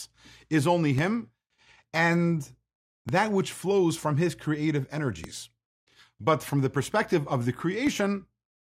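Speech with four DC steps, at 0.99, 3.09, 5.24 and 7.87 s, each a sudden shift of the zero line heard as a low thump. The waveform's baseline jumps, then eases back as a 20 Hz high-pass bleeds it away, and the spectrogram shows a brief broadband smear at each step.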